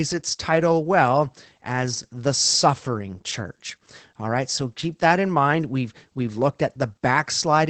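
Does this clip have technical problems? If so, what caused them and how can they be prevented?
Yes. Opus voice compression runs through the whole clip: the speech is audibly muffled, hoarse and slightly robotic because the SILK coder narrows the band and codes the excitation coarsely, which fits a bitrate around 12 kbps. A spectrogram shows a hard ceiling near 8 kHz with smeared harmonics. Encoding at a higher bitrate, or keeping the original uncompressed, would prevent it.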